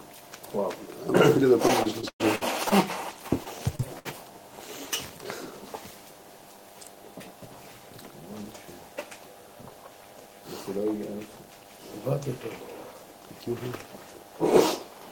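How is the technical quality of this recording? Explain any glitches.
Two short glitches, both repeated packet loss (robotic sound), at 1.67–2.73 s (six gaps, longest 110 ms) and 3.44–4.07 s (four gaps, longest 61 ms). Each missing stretch is filled by extending the preceding sound, leaving choppy stutters rather than a single clean dropout.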